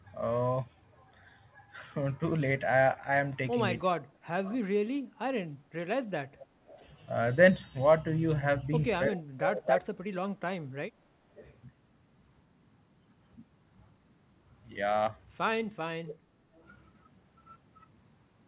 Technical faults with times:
3.84-3.91 speech suppressed in double talk
4.19-6.68 background gated by the echo canceller
4.44-11.52 echo leak
9.08-10.98 speech suppressed in double talk
16.08-16.63 echo leak
16.16-16.55 background gated by the echo canceller

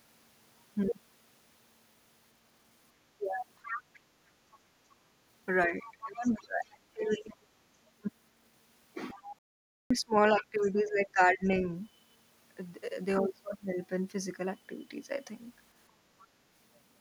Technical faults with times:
3.18-3.22 speech suppressed in double talk
3.62-4.00 other side's voice leaking through
5.66-7.49 speech suppressed in double talk
5.86-7.33 other side's voice leaking through
9.11-10.71 other side's voice leaking through
9.14-11.63 speech suppressed in double talk
9.39-9.90 playback stall
16.20-16.26 other side's voice leaking through

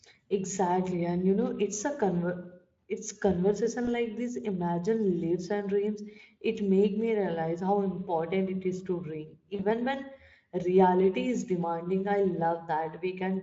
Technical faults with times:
3.85-3.88 VoIP packet loss concealed by the speech codec
9.55-9.62 VoIP packet loss concealed by the speech codec

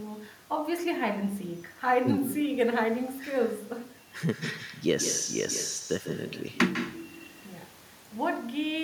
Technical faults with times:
0.00-8.84 echo with no canceller

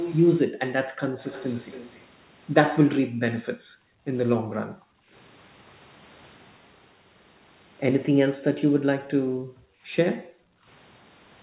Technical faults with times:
0.00-0.15 echo leak
0.48-1.18 background gated by the echo canceller
1.21-2.05 echo leak
3.01-3.21 background gated by the echo canceller
3.53-4.07 background gated by the echo canceller
4.38-5.12 background gated by the echo canceller
8.12-10.67 background gated by the echo canceller

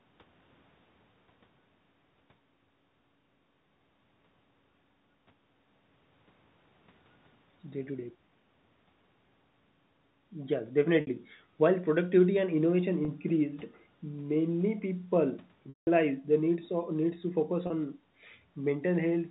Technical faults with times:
11.01-11.07 packet loss with pitch repetition
13.05-13.08 packet loss with pitch repetition
15.69-15.87 packet loss with pitch repetition
17.67-17.70 packet loss with pitch repetition

